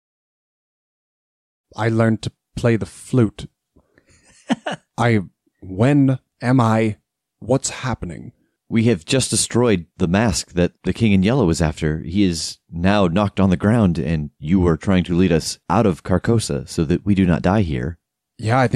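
No faults found; the speech fades in smoothly from about 1.5 s to 1.66 s with no click or hard edge.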